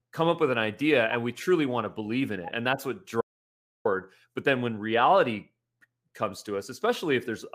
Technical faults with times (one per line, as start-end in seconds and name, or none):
3.21-3.85 audio dropout to silence